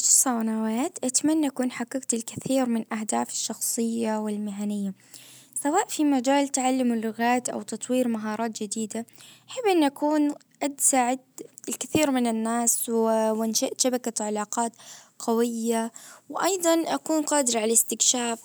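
Nothing stood out as a technical fault on listening to the speech here.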